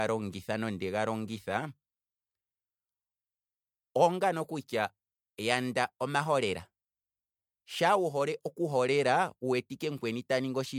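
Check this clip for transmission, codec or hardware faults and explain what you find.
There's one problem here, and it runs through the whole speech clip: generation loss. The audio sounds swirly and hollow, with smeared, soft-edged consonant attacks and a watery shimmer that's worse than a single lossy encode would give. The likely cause is the speech going through MP3 encoding and decoding about four times at a rate that fits 96 kbit/s. Each pass requantises on a shifted frame grid, so the noise and spectral gaps pile up.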